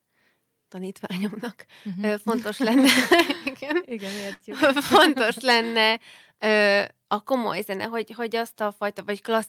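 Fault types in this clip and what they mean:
Burst of packet loss: at 4.33–4.50 s, after "igen igen", lost packets leave the last sound held and fading for 62 ms, then speech resumes further on.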